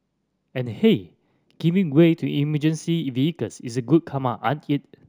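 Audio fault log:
throughout, imaging from linear upsampling: straight-line interpolation raised the rate, which fits a 16 kHz source taken to 44.1 kHz. This weak filter dulls the top end and leaves a mirror image from 8 to 16 kHz, about 35 dB down, heard as faint metallic shimmer on sibilants.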